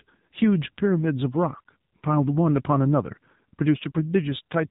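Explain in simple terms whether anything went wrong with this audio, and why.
AMR narrowband mobile codec, from start to finish: the speech passed through an old-style phone codec that discards everything above 4 kHz, leaving it dull and boxy. It rebuilds the voice from a rough throat-and-mouth model with few details, so it sounds plainly buzzy and synthetic.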